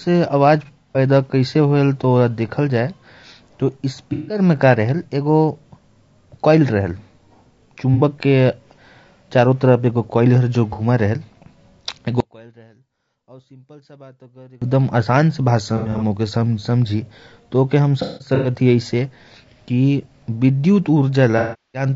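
Throughout the speech, low-delay AAC compression is the likely cause of rough, grainy harmonics and noisy gaps between them, which fits about 32 kbps.

AAC frame loss with concealment appears at 0.65–0.98 s (about 180 ms lost, in scattered runs up to roughly 70 ms), 4.13–4.39 s, 7.94–8.01 s and 10.73–10.82 s. The decoder rebuilds the missing spectrum, so each gap sounds like a smeared, noisy patch.

From 12.20 to 14.62 s, one channel inverted likely cancels the centred speech in mono, dropping it by about 29 dB to a faint residue.

AAC frame loss with concealment returns at 15.77–16.03 s, 18.02–18.49 s (with one run of about 200 ms) and 21.38–21.86 s (360 ms lost). The longest runs decay towards silence before the sound fades back in.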